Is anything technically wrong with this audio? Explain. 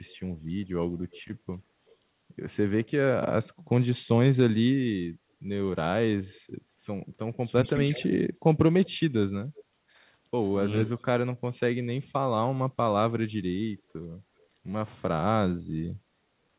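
Yes, there are two faults: a recurring echo leak and a brief stretch of speech suppressed in double talk.

Echo leak occurs at 0.06–0.16, 1.11–1.96, 7.92–9.64, 10.86–11.01 and 13.3–14.46 s. A copy of the speech returns about 380 ms late, from roughly 40 dB below the speech up to about 15 dB below at 7.92 s. It likely comes from a far-end loudspeaker whose echo canceller let some of the signal through. The fixed delay sets it apart from room reverberation.

Speech suppressed in double talk occurs between 7.43 and 8.05 s, overlapping the strongest echo. The talker's level dips by up to about 10 dB in short pieces totalling about a tenth of a second. This is likely the echo canceller turning everything down when it could not separate the two sides. Unlike a network dropout, the sound dips rather than going silent.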